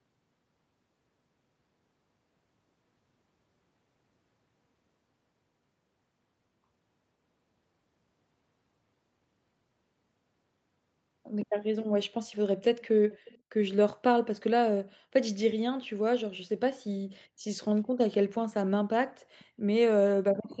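From 13.1 to 13.39 s, and again briefly at 19.39 to 19.45 s, a faint delayed copy of the speech returns about 0.52 s late, far quieter the second time. This is echo leak, likely from a far-end loudspeaker the echo canceller didn't fully cancel. Unlike room reverberation, it is a distinct repeat, not a smeared tail.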